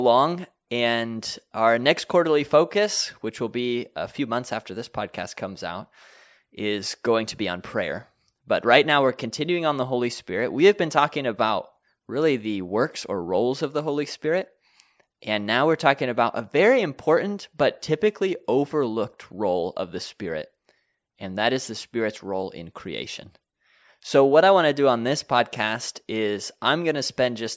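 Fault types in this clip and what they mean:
No fault types are present in this clip.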